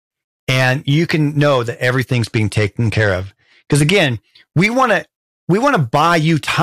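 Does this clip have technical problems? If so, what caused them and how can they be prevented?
Yes. Hard clipping runs through the whole clip: the speech was driven about 9 dB past what a stage could pass, so a small share of peaks are cut flat and crackle on loud syllables. Prevent it by lowering input gain or adding a limiter before the overloaded stage.

A Bluetooth SBC bit pool drop runs from 2.12 s, after "you can know that", to 3.97 s, just before "we want to we". A congested link forced coarser coding, dulling the treble and adding grit, which fits the bit pool falling from 28 to 13, around 102 kbps. Prevent it by reducing radio congestion, keeping devices close, or using a wired connection.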